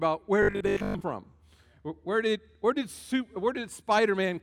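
A short audio clip with robotic sound from repeated short buffers between 0.43 and 1.03 s. For that stretch the sound takes on a rigid, metallic buzz at a fixed 50 Hz, most likely because new audio arrived too seldom and the playback filled gaps by looping the last 20 ms while real audio was skipped, with most of the passage made of repeats. A waveform shows identical 20 ms cycles; a spectrogram shows evenly spaced harmonic lines at multiples of 50 Hz.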